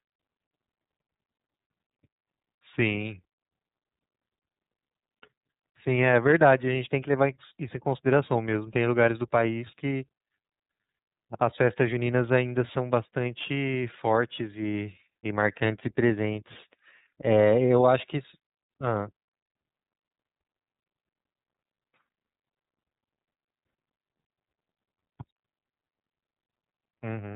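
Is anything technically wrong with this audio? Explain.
Yes. The whole clip carries iLBC codec damage. Nothing above about 3.8 kHz survives, so the speech sounds narrow and muffled. Each frame's excitation is coded independently. This leaves a plainly audible rough, synthetic edge, which fits iLBC's 30 ms, 13.33 kbps mode.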